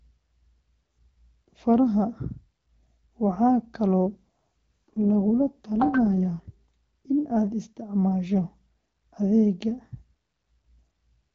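From about 4.06 s to 6.52 s there's an AMR rate drop, ending just before "in aad isticmaasho". The AMR-WB stream, carrying speech with only light coding roughness up to then, falls back to a much lower rate, which fits a step from 12.65 down to 6.6 kbit/s, as the link trades bits for error protection. The bandwidth holds and nothing drops out, but the voice turns grainy and synthetic until the rate recovers.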